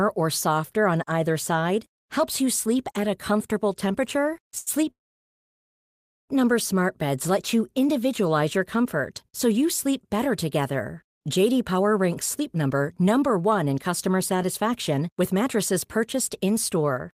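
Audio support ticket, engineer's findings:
Short stall from a late packet at 4.58–4.69 s, just after "at a comfortable temperature". Jitter buffer underrun. Last sound held about 80 ms, then continues seamlessly with nothing lost.

Call audio freeze at 4.91–6.31 s. A brief fading tail, then near-silence for about 1.3 s. Likely packets held in transit, emptying the jitter buffer. Resumes where it stopped, gap inserted, no content lost.

Jitter buffer speed-up from 12.40 s to the end. Receiver trims pitch-period chunks to shed the built-up delay. Speech runs at 107% with unchanged pitch, sounding hurried, with roughly 0.3 s removed.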